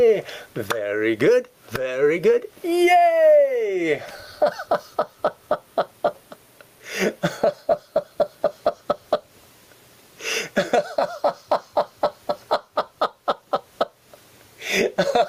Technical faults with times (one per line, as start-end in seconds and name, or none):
0.00-15.29 gain pumping